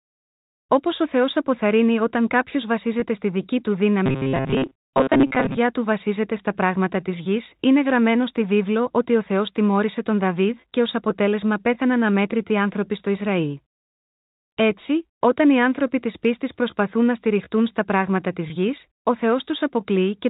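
At 3.00 to 3.02 s there is packet loss with pitch repetition. About 20 ms of audio goes missing, which fits one lost packet. The receiver fills the hole by repeating the last pitch period. It sounds like a tiny held, buzzy blip in the speech.

From 4.06 to 5.59 s comes a robotic sound from repeated short buffers. The speech turns into a stiff, metallic buzz pitched at 133 Hz. That fixed tone fits a repeated chunk of about 7.5 ms. Most of the stretch seems to be repeats. The likely cause is audio arriving too seldom. The player loops the last short buffer while real speech is skipped.

At 18.48 to 18.50 s the same packet loss with pitch repetition returns. Again about 20 ms is lost and bridged by a repeated pitch period. It gives another brief buzzy hold over the narrow telephone band of the G.711 coding.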